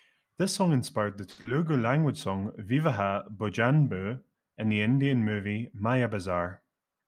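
At 1.31 s the speech hangs for about 80 ms: a short stall from a late packet. A packet was due but hadn't arrived, the jitter buffer emptied, and the receiver held the last sound for 60 ms until the data turned up, then resumed exactly where it stopped. That sets this stall apart from a loss: the sound is drawn out with a faint buzz or dip, but nothing is skipped, and playback runs about 60 ms later afterwards.

Only 20 ms later, at 1.41 s, comes short concealed packet loss, lasting about 60 ms. Here 60 ms of audio never reached the decoder in time, so the receiver patched the hole with 40 ms of invented continuation before blending back into real signal. Unlike the stall, material is actually gone, so the result is a brief smear or wobble, and the shortfall pulls the timing back a little, by roughly 20 ms.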